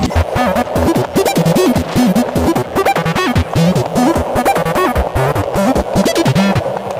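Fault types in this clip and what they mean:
Mains buzz: a steady, raspy buzz sits well below the main sound throughout, from switching spikes on 60 Hz mains whose harmonics climb to several kHz.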